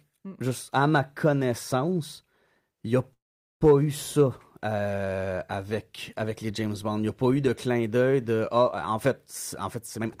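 Call audio freeze, 3.13 to 3.63 s: a brief fading buzz, then 0.43 s of silence, likely delayed packets draining the jitter buffer. The speech resumes with nothing lost.

Jitter buffer speed-up, 9.64 to 10.09 s: the receiver trims surplus buffered audio in pitch-period slices, roughly a tenth of a second, so speech sounds hurried at 118% speed, same pitch.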